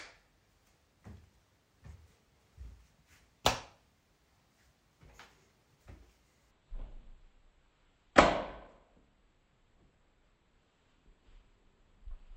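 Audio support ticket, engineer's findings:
Stereo read as mono from 6.51 s to end: sound drops to half speed, a full octave (12 semitones) low, faint mirrored image in upper spectrum. Probable component: decoder/channel handling; interleaved L/R samples consumed sequentially as one channel.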